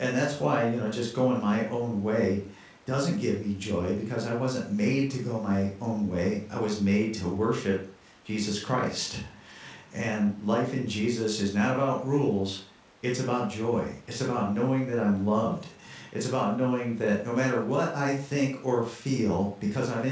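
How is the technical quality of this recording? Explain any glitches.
No glitches turn up anywhere in this speech recording. It has come through a call path, and the sound stops at about 8 kHz, which fits a wideband codec such as G.722.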